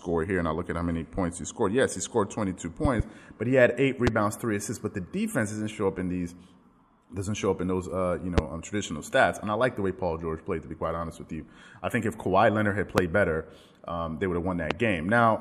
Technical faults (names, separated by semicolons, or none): loud pop